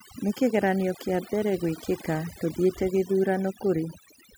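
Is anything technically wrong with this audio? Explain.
Yes. Throughout the speech, overdone noise removal is at work: a noise reduction stage set far too aggressively pulls individual frequency bands down or shuts them off near its noise estimate, taking quieter parts of the voice too. The background drops and breaks up into twinkling specks.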